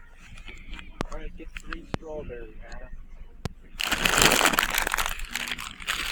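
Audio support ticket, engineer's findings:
Loud pop, three events: 1.01–1.03 s, 1.94–1.97 s, 3.46–3.48 s. Likely a voltage spike from a plug, switch or static entering the chain. Single sharp pops, each about 20 ms, up to about 20 dB above the sound, which continues underneath.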